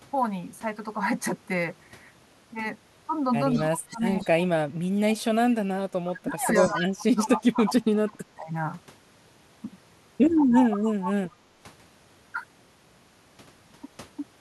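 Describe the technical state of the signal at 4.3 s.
At 4.3 s the speech sits inside a span of speech suppressed in double talk, from 3.56 to 5.35 s. The level dips and breaks up, falling by roughly 25 dB at worst. The likely cause is an echo canceller turning down the near talker while the far side also speaks.

An echo leak ends just before, from 4.09 to 4.27 s. A faint copy of the speech returns 173 ms late, roughly 25 dB below it. This is likely loudspeaker sound the echo canceller failed to remove.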